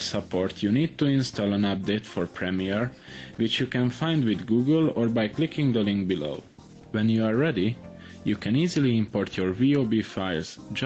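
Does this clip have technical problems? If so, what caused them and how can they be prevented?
Yes. Gain pumping runs through the whole clip. The swing is about 5 dB, so loud and soft parts sit close together and the sound feels squashed. The likely cause is input gain set far too high, with a fast limiter or compressor pulling it back on each peak. The top end stops near 8 kHz, which fits a low-bitrate Opus call path. To prevent the pumping, lower the microphone gain so the limiter rarely needs to act.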